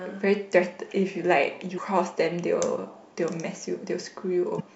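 Damaged data in the compressed stream makes the decoder lose frame sync twice, at 1.74–1.78 s and 4.56–4.61 s, each briefly breaking the speech.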